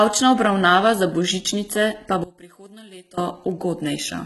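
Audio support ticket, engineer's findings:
Whole clip: treble gritty, metallic, lispy on s sounds, nothing above 11.8 kHz. Likely HE-AAC compression, heavy, fitting a stream around 16 kbps. Treble is rebuilt by band replication, so harmonics misalign. Unlike plain low-pass, top stays bright but synthetic.

2.24–3.18 s: speech drops about 22 dB, leaving a faint residue. Likely one channel inverted, cancelling shared centre content when summed. Unlike a dropout or gain dip, a faint difference signal survives rather than silence or uniform quieting.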